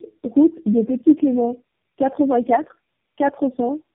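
Tandem speech coding runs the whole way: it sounds like several low-rate speech codecs stacked, each re-coding the last, leaving rough, muffled, warbly speech with nothing above 3.5 kHz.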